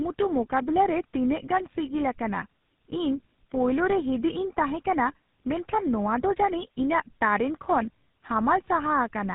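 Tandem speech coding runs through the whole clip. The speech was compressed by a low-rate speech codec, decoded, passed on, and compressed again, so the second coder had to model audio already damaged by the first. The roughness and warble point to GSM full-rate coding at 13 kbit/s done twice, with a G.711 A-law link between. The result sounds gritty, muffled and unsteady, with nothing above 3.8 kHz.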